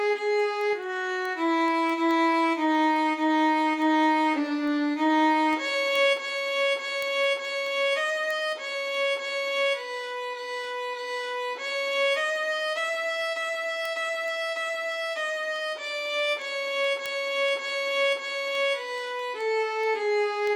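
Sharp, uneven clicks run at a steady pace, roughly five per second, from 0.19 s to 20.47 s. These are word clock ticks: the receiving device runs on its own clock, around 100 ppm adrift of the sender's, so each slip drops or repeats a sample.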